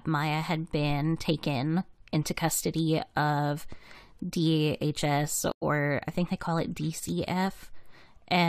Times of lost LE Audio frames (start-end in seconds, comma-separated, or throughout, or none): none